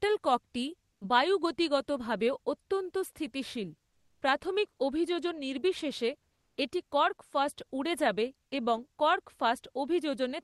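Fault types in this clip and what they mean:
Comfort noise in place of the background: in pauses at 0.93, 3.89 and 6.33 s the faint background becomes smooth, featureless hiss, likely from Opus discontinuous transmission; a spectrogram shows even, textureless noise there, and the last patch sits about 7 dB lower in the waveform.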